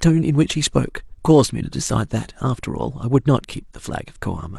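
No technical fault can be heard anywhere in the speech. The audio runs without any interruption or disturbance from beginning to end.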